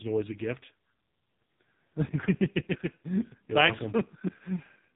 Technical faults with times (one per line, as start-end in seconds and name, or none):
0.00-4.96 AMR narrowband mobile codec